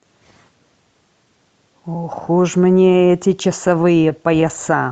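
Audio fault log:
3.67–4.51 s, scattered short gaps: about seven small holes open across this stretch, each no longer than roughly 15 ms and together only about 50 ms, some 7 percent of the span. The receiver covers each one by stretching the last bit of sound forward, so nothing drops out; instead the speech picks up brief ticks, smears and hiccups, heard over the call codec's coding noise and its upper band edge near 8 kHz.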